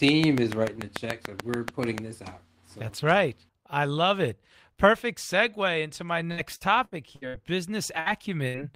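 From 0.09 s to 1.99 s, just before "this out so that's", a train of clicks ticks over the speech, about 15 of them at a regular 6.9 per second and standing well above the speech level. The pulses are near-identical and keep the same pace regardless of the talking, which points to likely electrical interference or a struggling interface. Unlike packet loss, the clicks sit on top of intact audio and remove nothing.

Straight after "perfect segue into my", from 6.31 s to 7.37 s, repeated packet loss gives the speech a choppy, robotic quality. Five gaps in this one-second stretch were each patched by extending the preceding sound, with the longest lasting 69 ms. In all, about 300 ms of speech is missing and roughly 29% of the span is concealed. The gaps are close enough together to merge into a continuous chop, which is what separates this passage from the isolated dropouts that follow.

Two separate bursts of packet loss occur from 8.00 s to 8.09 s and from 8.48 s to 8.57 s. 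Each replaces about 60 ms of audio with a continuation of the last sound that fades as it goes, heard as a brief held buzz or dying hiss. The speech then resumes further on, with that moment gone. Because each burst stands alone, it sounds like a single hiccup rather than sustained roughness.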